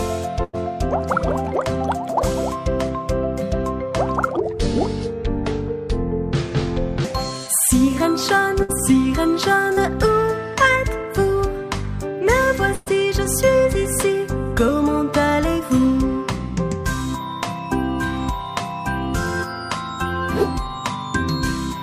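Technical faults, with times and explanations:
0.43–0.55 s, 8.62–8.71 s and 12.75–12.88 s: burst of packet loss. Runs of packets went missing, about 100 ms, 60 ms and 120 ms of sound. Each time the receiver stretched the last sound across the gap and let it fade, which you hear as a held buzz or dying hiss. At 12.75 s the fill covers the whole hole with no silence. The audio then picks up further along, with the stretch between simply gone.
4.37–7.04 s: section at the wrong speed. This passage plays at about 0.66 times its proper rate, so it drags and sits roughly seven semitones lower, deep and slow until normal speed returns at 7.04 s. Speed and pitch shift together here, as they would if playback or editing had been driven by the wrong clock, which is the likely cause.
9.73–9.79 s: short concealed packet loss. About 40 ms never reached the decoder in time, and the receiver covered the hole by continuing the preceding sound, then blending back into the real signal. 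The result is a brief smear or wobble rather than a clean dropout.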